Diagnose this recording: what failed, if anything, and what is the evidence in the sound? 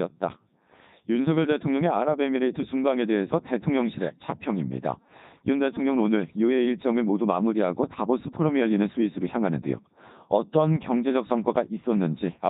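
The failure is at the codec stage. The speech has passed through a Codec 2 vocoder for its whole length. It sounds robotic and buzzy from start to finish. The decoder does not keep the original waveform. It rebuilds the voice from sine waves using only pitch, voicing, energy and a spectral envelope. The damage is heavy. The rate of detail fits Codec 2's highest mode, about 3.2 kbit/s.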